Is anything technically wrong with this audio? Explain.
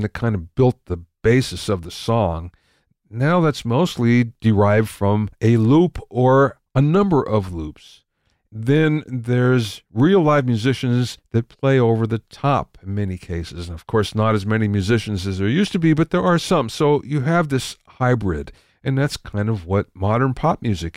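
No, nothing technically wrong.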